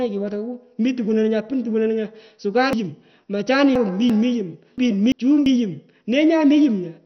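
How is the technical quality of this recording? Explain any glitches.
The technical quality is poor: the speech is dull and grainy throughout, and it jumbles twice in the middle.

The whole recording was likely passed through heavy MP2 compression at a low bitrate, around 48 kbps. With so few bits to share among its sub-bands, the encoder switches the upper bands off entirely, so nothing survives above about 6.2 kHz. The bands that remain are coarsely quantised and flicker in and out. The result is a muffled, gurgling, granular texture over every syllable.

There are two cases of chunks out of order, where the audio was handled in blocks of about 341 ms and one block was played after the blocks that should have followed it. From 2.73 to 4.10 s, a chunk arrives three chunks late. From 4.78 to 5.46 s, a chunk arrives one chunk late. Nothing is dropped, but each reordering creates hard joins, and the speech in those stretches sounds scrambled.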